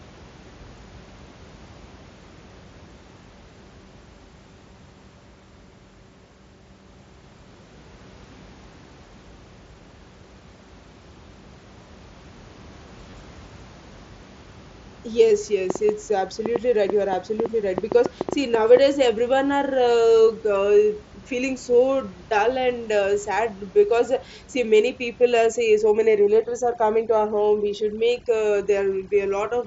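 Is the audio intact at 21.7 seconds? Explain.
No, not quite. At 21.73 s there's a brief concealed Bluetooth headset packet loss, about 7.5 ms of audio that points to a single dropped packet between headset and phone. The receiver patched the gap by repeating the best-matching bit of the waveform it had just played, so the sound carries straight on. With only one packet gone, the repair is nearly seamless, at most a faint blip before real audio resumes.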